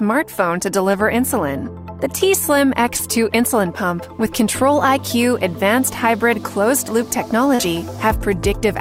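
At 0.91 to 0.95 s, 2.97 to 3.01 s and 7.55 to 7.61 s there's short concealed packet loss: about 20, 20 and then 40 ms of audio arrived too late, and the receiver papered over each gap by extending the preceding sound. You hear quick smears, the last one a bit longer.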